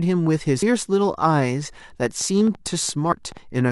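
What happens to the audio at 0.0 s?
Nothing goes wrong at 0.0 s; the speech is intact at that moment.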